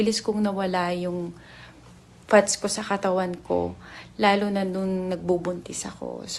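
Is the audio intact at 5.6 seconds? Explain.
Yes, at 5.6 seconds the audio plays through cleanly with no dropout, glitch or other fault at that moment.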